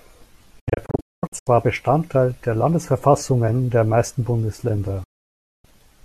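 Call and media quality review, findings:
Digital broadcast dropout, 0.59–1.47 s: speech breaks into several short holes, 528 ms missing across about 0.86 s, longest gap 216 ms, 8 ms fades at each edge. Receiver muting on lost or corrupt frames.

Digital broadcast dropout, 5.03–5.65 s: one solid 600 ms silence with 8 ms fade out and back in. The material in the gap is lost. Receiver mute, consistent with a frame run failing checksum.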